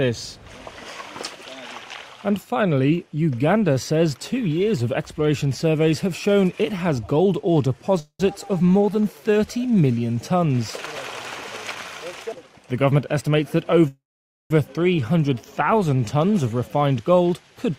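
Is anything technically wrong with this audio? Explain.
Yes, there are two kinds of fault, each happening twice.

Call audio freeze, at 7.99–8.21 s and 13.88–14.52 s. The sound stalls and trails off into a fading buzz, then goes quiet for about 80 ms the first time and half a second the second time before picking up where it left off. That's likely late packets draining the jitter buffer. Nothing is lost; it just runs about 0.2 s and 0.63 s later afterwards.

Jitter buffer speed-up, at 12.39–13.35 s and 16.62–17.75 s. With backed-up audio to clear, the receiver snips out tiny pitch-period slices over and over. The pitch stays put, but things rush along at about 120% and then 112% speed, trimming roughly 0.2 s and 0.15 s.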